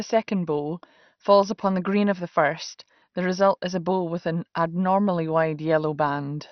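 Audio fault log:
Throughout: MP2 compression, likely from a low bitrate around 48 kbps, leaves the speech dull and gurgling, with nothing above 6.1 kHz and coarse, flickering sub-bands.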